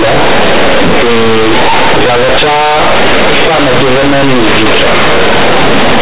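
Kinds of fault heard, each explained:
Companded audio read as linear: the speech was stored as mu-law telephone bytes at 8,000 samples a second but is being played as plain linear 8-bit values with no expansion. Each sign change throws the output across about half its range, so quiet passages come out as loud as stressed syllables. On a waveform the trace stays large throughout, with blocky jumps and no speech envelope. On the spectrogram, dense broadband hash fills everything below 4 kHz, pauses included, heard as a very loud, buzzy roar.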